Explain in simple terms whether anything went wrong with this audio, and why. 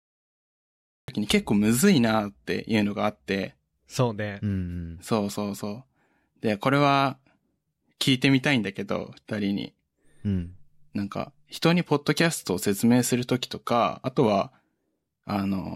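The recording started late, a cut-off start: about 1.08 s of digital silence, then the speech begins abruptly mid-sound, with no natural lead-in.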